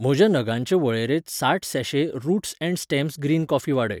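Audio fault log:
No faults heard.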